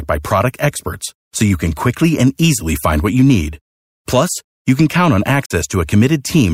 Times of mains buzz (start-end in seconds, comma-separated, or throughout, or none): none